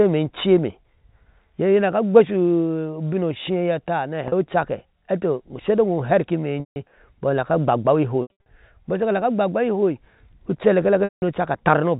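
Packet loss with pitch repetition occurs at 4.28–4.32 s (40 ms), 6.60–6.76 s, 8.22–8.46 s (scattered, longest run 80 ms) and 11.04–11.22 s. The receiver loops the last pitch cycle: brief gaps sound buzzy and held, longer ones fade. On the spectrogram, the harmonics freeze into flat, tapering bands. The waveform shows identical cycles shrinking.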